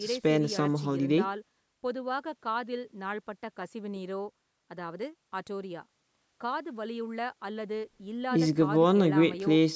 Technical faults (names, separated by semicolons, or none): none